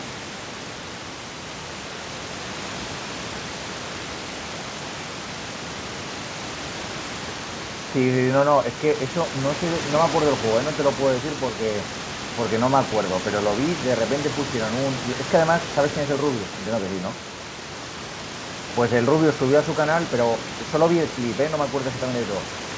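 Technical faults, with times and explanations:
No technical faults are present, so there are no times or explanations to give.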